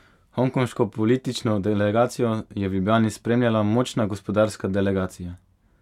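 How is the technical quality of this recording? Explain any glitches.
No glitches or dropouts are audible anywhere in the speech recording, so there is nothing to explain.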